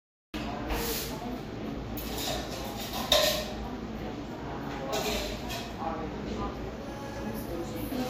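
Everyday sound, not speech or music, with a cut-off start: the first 0.34 s is digital silence, and at 0.34 s the audio jumps straight into a sound already in progress, with no attack or fade. On a waveform this is a flat line that steps abruptly to the sound, and on a spectrogram a blank strip ending in a hard vertical edge, because the recording or stream began late. Throughout, the sound has the dull quality of heavy compression, and a spectrogram shows nothing above 16.5 kHz, a flat shelf where the highest frequencies should be. The file itself is a high-rate MP3, so this points to low-bitrate audio saved at a high bitrate: the sound likely passed through a low-rate lossy codec first, something on the order of a 46 kbit/s Vorbis stream, and was then re-encoded as MP3 at around 256 kbit/s. The second encoding preserves the earlier losses rather than repairing them, so the missing top end and the compression artefacts remain in the larger file.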